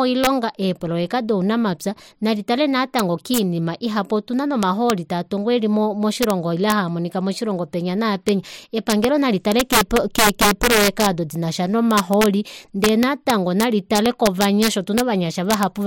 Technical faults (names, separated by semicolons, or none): integer overflow